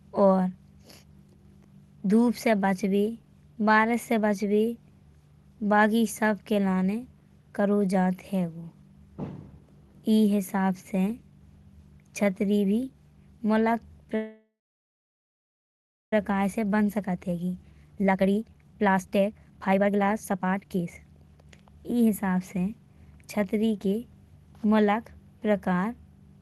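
At 14.15 s there's a call audio freeze, likely from packets stalling: a brief fading buzz, then about 1.6 s of silence, and the speech picks up at 16.13 s with nothing lost. From 16.41 to 22.09 s the jitter buffer speed-up trims pitch periods to shed roughly two seconds of backlog, so the speech runs about 135% fast at unchanged pitch.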